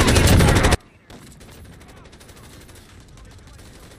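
From 0.75 s to the end the sound drops about 29 dB to a faint remnant, likely one channel inverted, cancelling shared content when summed to mono.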